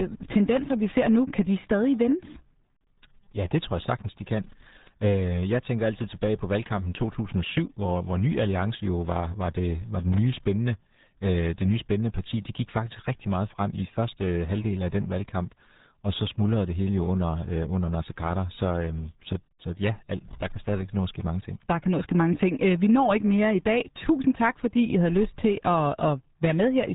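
From start to finish the speech sounds muffled, gargly and boxed in, with nothing above 3.8 kHz. This is the RealAudio 14.4 codec at work. Its dial-up-era design throws away most of the detail, which fits an 8 kbit/s speech codec, and the result is heavy, smeary damage to every syllable.

From 10.00 to 10.18 s, between "var det var" and "nye spændende øh det", a short irregular burst of scratchy crackle breaks through. This is loose connector crackle: a worn or dirty contact rapidly making and breaking, chopping the signal into ragged fragments.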